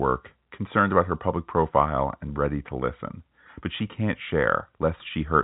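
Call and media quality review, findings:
No faults found; speech sits in a narrow telephone band with nothing above 3.8 kHz, consistent with G.711 coding on the path working as expected.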